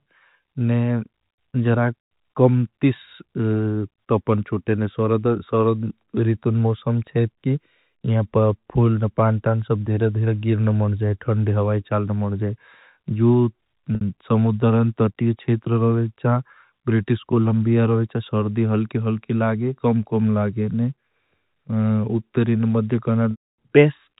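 At 13.95 s there's packet loss with pitch repetition: 60 ms went missing, the last pitch cycle got looped, and you hear a brief buzzy hold. At 23.31 s the gap runs 270 ms, so the repeat fades to silence before speech cross-fades back in.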